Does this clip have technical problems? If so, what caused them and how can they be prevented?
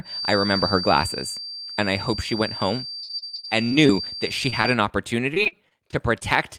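Yes. A feedback whistle at 4.7 kHz runs from 0 to 4.81 s, roughly 10 dB under the speech, likely from loudspeaker output leaking back into the microphone; a spectrogram shows one thin horizontal line. Prevent it with headphones, lower speaker volume or echo cancellation.

Repeated packet loss gives robotic sound from 2.99 to 3.91 s (11 gaps, longest 55 ms, about 30 percent concealed) and from 5.34 to 6.23 s (longest 42 ms, about 17 percent). The waveform shows choppy, repeated cycles, and the spectrogram shows smeared, flattened harmonics. Prevent it with a steadier network connection and a larger jitter buffer.

Short concealed packet loss at 4.50 to 4.54 s and 4.62 to 4.66 s leaves brief smears, seen as tiny blurred slivers breaking the spectrogram's harmonics. Prevent it with a wired connection and forward error correction.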